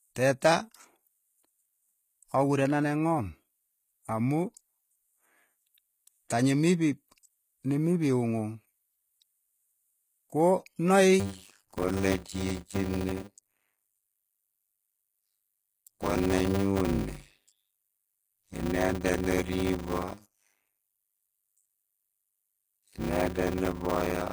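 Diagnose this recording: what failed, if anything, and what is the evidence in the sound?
Codec stage: the treble is gritty and metallic, likely from HE-AAC compression at a low bitrate of about 20 kbps.

Buffer stage: from 11.2 s to the end, a 100 Hz buzz appears and the sound runs at 0.533 speed. This block size mismatch (padded) fits 256-sample blocks zero-filled.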